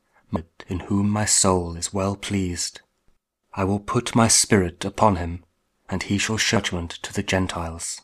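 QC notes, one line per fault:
0.35 s and 6.55 s: damaged data in a compressed stream. Each time a brief blip breaks the audio for under 20 ms. Corrupted bytes in the encoded stream make the decoder misread or drop those frames and lose sync until it finds the next frame header.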